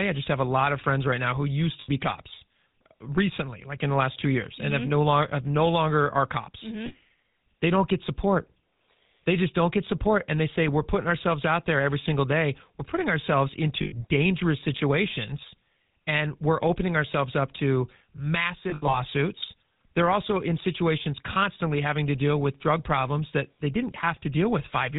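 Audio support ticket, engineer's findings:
GSM full-rate codec, whole clip: buzzy, gravelly roughness and nothing above 4 kHz, clearly audible throughout. A vocal-tract model is driven by a sparse pulse train that keeps only every third excitation sample, which fits the 13 kbit/s full-rate path.

Lost GSM frames: short metallic rings where the last good frame repeats. At 1.8 s for 80 ms, between "right now who used" and "be cops recently like". At 6.86 s for 40 ms, after "no longer are cops". At 13.82 s for 100 ms, after "putting ourselves". From 18.7 to 18.97 s, scattered over 240 ms, with the longest run under a tenth of a second.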